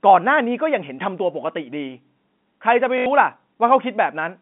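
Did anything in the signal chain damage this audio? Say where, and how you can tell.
Yes, network packet loss with the last packet repeated, from 2.98 to 3.06 s. A 50 Hz robotic buzz fills those 80 ms, which fits 20 ms packets.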